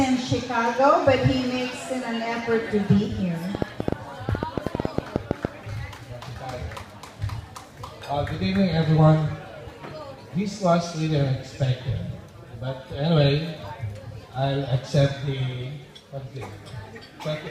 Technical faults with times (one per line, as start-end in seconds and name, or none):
3.55-5.46 train of clicks